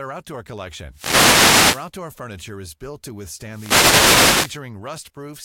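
A burst of hissing static swishes over the speech from 0.91 to 1.92 s, between "outdoor collection" and "furniture is built to", and again from 3.46 to 4.63 s after "furniture is built to". These are wireless microphone noise hits: the FM radio link faded, letting receiver noise surge over the voice.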